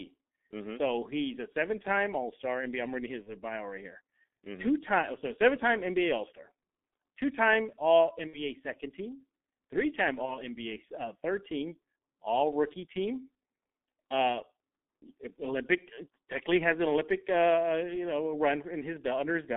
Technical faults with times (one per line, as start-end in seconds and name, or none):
0.00-19.57 G.723.1 codec
3.23-3.32 VoIP packet loss concealed by the speech codec
8.27-8.44 VoIP packet loss concealed by the speech codec
10.25-10.36 VoIP packet loss concealed by the speech codec